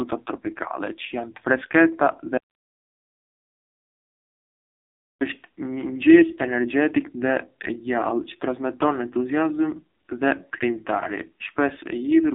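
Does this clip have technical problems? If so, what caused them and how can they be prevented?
Yes: AMR narrowband mobile codec throughout. Nothing above 3.7 kHz, thin 300 Hz to 3.6 kHz phone band, heavily buzzy synthetic tone, which fits a very low AMR-NB bitrate near 5.9 kbps. Record or transfer over a wideband path instead of a narrowband mobile call.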